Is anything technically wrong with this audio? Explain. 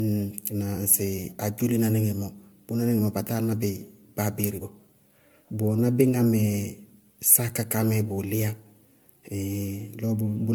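Yes, there's generation loss running through the whole speech clip. It sounds swirly, hollow and smeared, with softened consonant attacks and nothing above 20 kHz. Likely cause: the audio was re-encoded as MP3 around seven times at moderate bitrates. Each pass requantised on a shifted frame grid, stacking noise and spectral holes.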